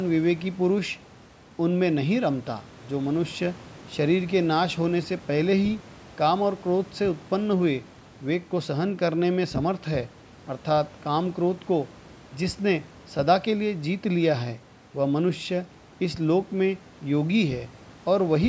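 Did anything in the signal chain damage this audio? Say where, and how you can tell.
No, nothing in the chain damaged this speech: the only processing audible is the call microphone processing, whose high-pass filter normally trims the lowest bass and whose band stops at 8 kHz, and neither is a fault.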